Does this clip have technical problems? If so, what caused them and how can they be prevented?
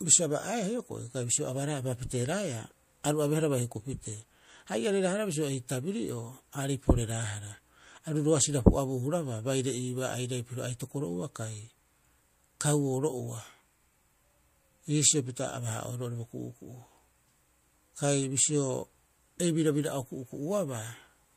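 Yes. At 3.03 s, just before "aru abeehara", there is pre-echo: a brief hiss about 10 dB up, 11 ms long, ahead of the attack. Unlike a click, it smears before the onset. The codec's block spread its noise backward, which fits a transform codec that never switched to short blocks. Enabling block switching around sharp attacks prevents it.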